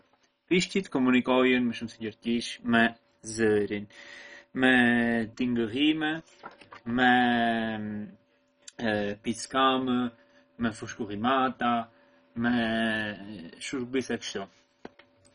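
MP2 compression damage runs through the whole speech clip, and it is heavy. Nothing sounds above about 10.4 kHz, giving the speech a dull, closed-in top. Likely cause: an MPEG Layer II encoder starved of bits, at a rate low enough to point to roughly 32 kbps. It divides the spectrum into sub-bands and, lacking bits, shuts the upper ones off and quantises the rest coarsely, so bands flicker in and out with a gurgling, granular grit.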